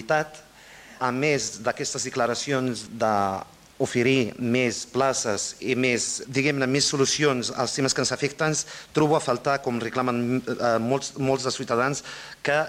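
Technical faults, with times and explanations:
No technical faults are heard, so there are no times or explanations to give.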